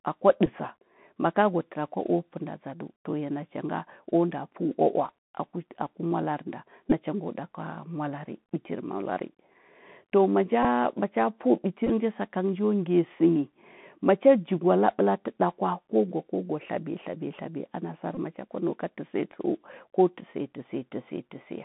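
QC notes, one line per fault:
Throughout, Bluetooth CVSD headset codec: The speech is confined to a narrow telephone band, roughly 150 Hz to 3.6 kHz. That band and the coarse, plainly audible damage fit one-bit CVSD coding at 64 kbps, where each sample only steps up or down. Loud, bright sounds outrun the adapting step size and distort. S sounds turn scratchy, and a granular hiss sits under the speech.
0.46 s, 6.90–6.93 s, 10.63–10.65 s, 11.87–11.90 s, 18.15–18.19 s, Bluetooth headset packet repeated: Short dropouts were filled by decoding the previous packet's bits again. The gaps are about 7.5 ms at 0.46 s, 15 ms at 6.90 s and 10.63 s, and 18.8 ms at 11.87 s and 18.15 s. At 11.87 s the losses are scattered over 30 ms, with the longest run near 7 ms. Repeats every 3.75 ms give a brief buzz near 267 Hz.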